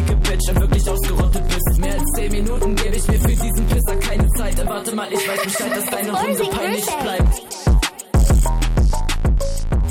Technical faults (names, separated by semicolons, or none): none